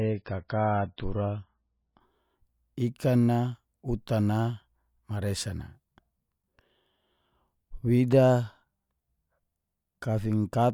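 From 0 to 2.0 s the speech shows an adaptive stream starting at a low bitrate: nothing is present above 5.5 kHz and codec artefacts are stronger, which fits a very low-rate MP3 used for fast startup. At 2.0 s quality jumps abruptly, with no gap.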